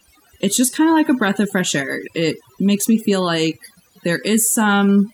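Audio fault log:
throughout: overdone noise removal. A noise reduction process set too aggressively has been applied across the whole speech clip. Whenever a frequency band sits close to what the tool takes for the noise floor, it is pulled down hard or muted entirely, and the softer parts of the voice fall below that threshold along with the noise. The gaps between phrases collapse into near silence dotted with twinkling specks.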